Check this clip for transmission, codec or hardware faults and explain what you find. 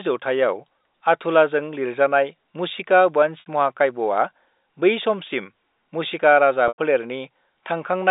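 Two packet losses with pitch repetition occur in this speech, which is carried over G.711 A-law telephone coding in a 250 Hz to 3.7 kHz band. At 3.40 s, 60 ms of audio is missing. The receiver bridges the gap by looping the last pitch period, which gives a briefly held, buzzy tone. At 6.68 s, just after "मुशिका राजा", a 100 ms gap is concealed the same way. It fades toward silence before speech returns through a short cross-fade. These lengths fit three and five lost 20 ms packets.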